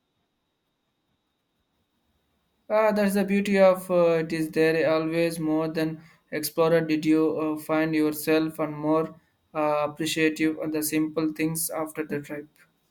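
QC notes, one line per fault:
Nothing stood out on listening to this speech recording.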